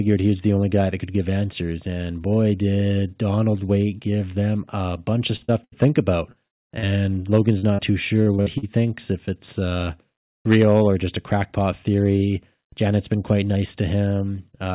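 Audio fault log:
5.36–6.86 s and 7.59–8.66 s: repeated packet loss (robotic sound), six gaps in each run, the longest 77 ms and 44 ms. Each hole is bridged by extending the preceding sound before the next arrives, giving choppy, robotic audio; band-limiting to 4 kHz fits a G.711 mu-law call path.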